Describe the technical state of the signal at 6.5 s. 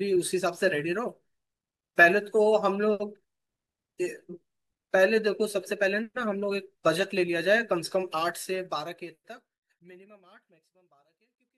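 At 6.5 s the speech signal is intact, with no dropout, click, distortion or other fault.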